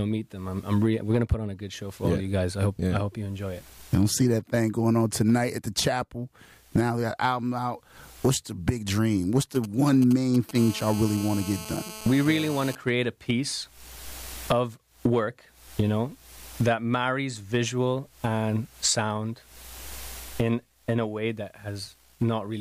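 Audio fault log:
9.40–10.51 s: GSM signalling bursts. A galloping dit-dit-dit of short buzzes sits under the sound, roughly 15 dB below it. A 2G phone close by is sending short groups of radio bursts while it signals to the network. The audio circuit rectifies each group into a pulse train at 216.7 Hz. So the interference arrives in clusters, not as a steady tone.
10.55–12.75 s: GSM phone buzz. The clusters merge into a continuous hard, raspy buzz at 216.7 Hz, about 14 dB below the signal. The phone has moved into a call and now transmits a burst on every frame, 216.7 times a second. Rectifying that regular pulse train yields a tone rich in harmonics. It holds steady and has no link to the wanted sound.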